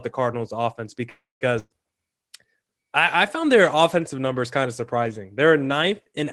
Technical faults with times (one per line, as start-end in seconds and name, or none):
1.09-1.44 call audio freeze
1.59-1.73 burst of packet loss